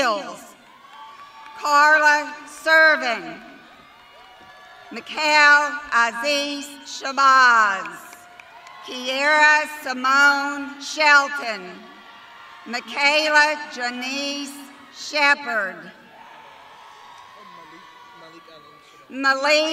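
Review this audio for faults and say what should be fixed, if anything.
No faults found; nothing to fix.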